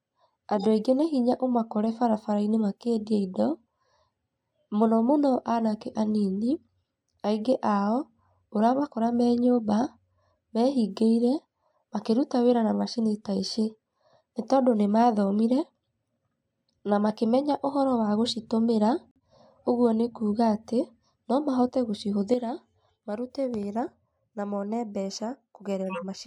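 Speech, with two bursts of corrupt frame decoded: a short chirpy blip from 0.55 to 0.66 s and a longer one from 25.88 to 26.06 s, where damaged compressed frames got played anyway and sprayed energy peaking around -20 dBFS into the wrong frequencies. At 19.09 s there's a corrupt frame muted dropout, an abrupt silent hole of about 0.1 s, which fits several rejected frames being swapped for silence. From 22.34 s to the end everything, background included, drops about 8 dB at once, a sudden gain jump, likely a gain change applied with no ramp.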